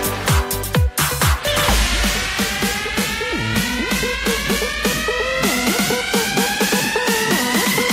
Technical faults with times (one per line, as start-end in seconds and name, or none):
2.84-4.84 adaptive stream at a lower bitrate